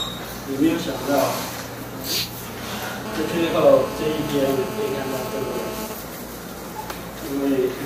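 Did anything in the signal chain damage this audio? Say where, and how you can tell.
Yes. From 3.06 to 5.87 s a hard, raspy GSM phone buzz at 217 Hz sits about 8 dB below the signal, rich in harmonics and steady throughout. A nearby 2G handset in a call is bursting RF, and the analogue wiring rectifies those pulses into audio.

From 5.90 to 6.92 s the buzz turns into GSM signalling bursts, even ticks with a longer 217 Hz buzz twice a second, much quieter at roughly 15 dB under the signal. The phone is still in the call but idle, sending only short burst groups that the analogue circuit again demodulates.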